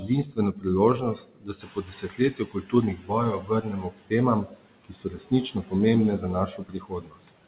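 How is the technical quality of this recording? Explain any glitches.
The recording is marred by noise suppression throughout, which clips parts of the speech and briefly lags behind a rise in the room's background noise.

Noise suppressor artifacts run through the whole clip. The suppressor pulls steady background bands down by about 18 dB frame by frame, so the noise dips between phrases.

Speech cut by the noise suppressor occurs from 0.00 to 0.66 s, 0.98 to 4.13 s, 4.44 to 5.73 s and 6.19 to 7.36 s. The suppressor mistakes quieter speech for noise and drops it by about 17 to 19 dB, so soft consonants and endings sound swallowed. This affects around two seconds in the long middle stretch and under a second in each of the others.

The noise suppressor is catching up from 1.6 to 2.96 s. The room noise jumps by about 12 dB around 1.5 s, and the suppressor's estimate needs 1.36 s to follow. 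The louder noise leaks through with only about 12 dB of reduction before settling down.

The narrowband sound, with nothing above 4 kHz, comes from the call path and fits G.711 mu-law at 64 kbps.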